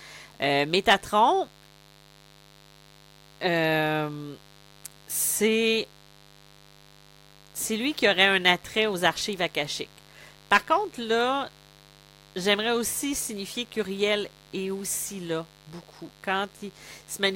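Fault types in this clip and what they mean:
Mains buzz: a steady, raspy buzz sits under the speech for the whole clip, well below the voice at about 30 dB down. It comes from sharp switching spikes, the kind a dimmer, rectifier or unshielded cable lets in, arriving twice per cycle of a 50 Hz supply. Those spikes carry a dense ladder of harmonics of 50 Hz stretching into the kilohertz range, which gives the buzz its edge rather than a smooth hum.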